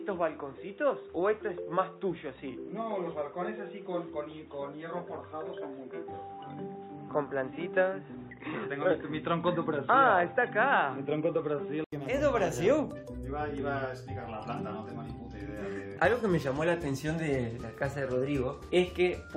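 Boxy until 11.92 s, spectrogram flat-topped at 3.8 kHz; an 80 ms gap then restores full band, likely input switched to a poorer device.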